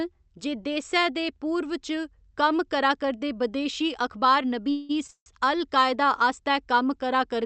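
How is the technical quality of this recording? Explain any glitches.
The speech has two short call audio freezes close together, and the sound arrives over a call link whose spectrum stops at about 8 kHz.

At 4.71 to 4.91 s and again at 5.11 to 5.28 s, the talking stalls as packets were likely held up in transit and the jitter buffer ran dry. The receiver stretches the last sound into a fading buzz for about 178 ms, then about 154 ms, with the second trailing into roughly 70 ms of silence. Speech then resumes where it stopped, so each stall adds delay and nothing is missing. On a spectrogram, the final spectrum smears into flat horizontal streaks that fade out. On the waveform, a decaying, repetitive stretch appears, and the second one ends in a flat line.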